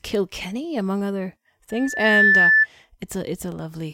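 Speech, with a loudspeaker feedback squeal from 1.70 to 2.67 s. A 1.8 kHz tone swells over about half a second to roughly 10 dB above the speech. The microphone is picking up its own loudspeaker.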